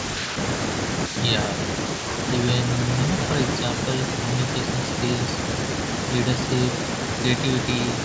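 Nothing in the speech stood out as a fault on listening, and the lowest bass and everything above 8 kHz are missing, as expected from normal call microphone processing.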